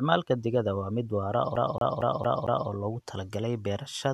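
From 1.56 s to 2.69 s the speech sticks like a CD stuck on one turn: the player keeps jumping back to the same place, so a fragment about 0.23 s long plays five times in a row, each loop cut by a tiny mute where the jump lands. It comes across as a rapid, mechanical stutter. On a waveform the same shape repeats at a steady 227 ms spacing with thin gaps. A spectrogram shows identical vertical blocks separated by narrow breaks.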